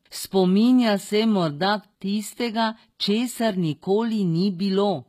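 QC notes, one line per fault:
throughout, HE-AAC compression: the top end is gritty, with s sounds coming out lispy and metallic and nothing above about 14.9 kHz. That's likely spectral band replication faking the treble from lower bands, which fits a low bitrate around 20 kbps.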